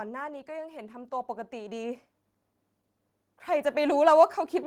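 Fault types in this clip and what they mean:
Automatic gain rising: from 0.45 to 2.08 s and again from 3.23 to 4.32 s, the level control judges the speech input too quiet and raises its gain gradually, by about 7 dB then about 4 dB, so voice and background noise swell together.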